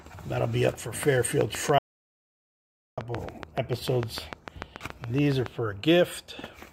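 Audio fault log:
1.41–5.47 s, train of clicks: about 30 regular clicks at 6.9 per second, peaking some 15 dB above the sound, likely from interference injecting pulses.
1.78–2.98 s, audio dropout to silence: 1.19 s of complete silence without room tone, likely a lost input while silence kept being recorded.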